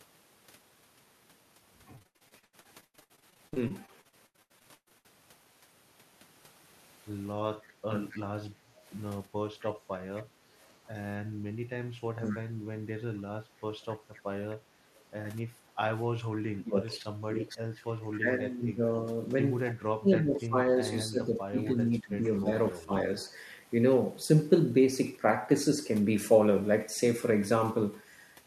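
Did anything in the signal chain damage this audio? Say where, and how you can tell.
Yes. Between 1.95 and 5.06 s the network dropped or delayed packets repeatedly, and the receiver's concealment kept patching each hole by extending the previous sound. Dozens of short gaps, the longest 118 ms, leave about 40% of that span rebuilt, so the speech turns choppy and robotic.

In call processing, the echo canceller likely misjudged double talk and treated the near talker as echo. From 7.89 to 12.28 s the speech briefly dips by roughly 20 dB, and from 15.81 to 22.93 s it is pulled down by about 15 dB for roughly four seconds in total.

An echo leak likely comes from a loudspeaker endpoint whose canceller let part of the playback back into its microphone. From 8.11 to 15.02 s a faint copy trails the speech by 258 ms at about 25 dB below it, and a short scrap returns at 19.69 to 19.74 s, about 20 dB down.

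The same canceller clamped the microphone while the loudspeaker was active, producing background gated by the echo canceller. The room sound drops by about 7 dB at 8.67 to 8.84 s and again at 15.49 to 15.53 s, then recovers once the suppression releases.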